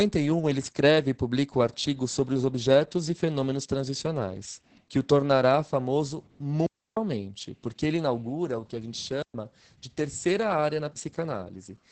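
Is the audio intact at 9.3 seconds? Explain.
No. A digital wireless dropout cuts the audio from 9.22 to 9.34 s, a gap of 120 ms. The radio link lost too much data, so the receiver muted its output with a very brief fade instead of passing corrupted samples. It is heard as a clean hole of near silence, with no click or noise burst on either side. On a waveform it is a flat, near-zero stretch with short tapered edges. On a spectrogram it is a vertical band empty at every frequency.

The same moment also carries the Opus voice compression present across the whole clip. The SILK coder at about 10 kbps models the sound with linear prediction and codes the excitation coarsely, so the speech sounds muffled, hoarse and faintly robotic. A spectrogram shows a hard ceiling with nothing above 8.6 kHz, and smeared, blocky harmonic detail below it.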